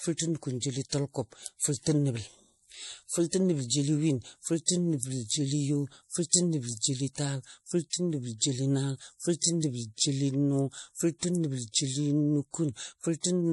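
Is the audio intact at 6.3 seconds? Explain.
No. Pre-echo occurs from 6.30 to 6.33 s, a smear about 36 ms long just ahead of a sharp attack in the speech. A transform codec spreads its quantisation noise across a whole block, so when the onset falls late in that block, the noise sized for the loud part also fills the quiet moment before it. The result is a brief hiss leading into the attack, which then sounds soft rather than crisp.

That moment also carries the damage heard throughout the clip, most likely from MP3 compression at a low bitrate around 48 kbps. Nothing reaches above 11.5 kHz, so the treble is cut flat, and the coding damage is plainly audible as a watery, swirling texture. At this bitrate the encoder drops weak frequency lines that flicker on and off between frames, and it smears attacks.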